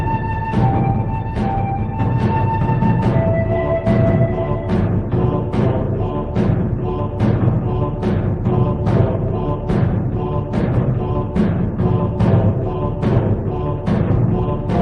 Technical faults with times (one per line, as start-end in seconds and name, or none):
none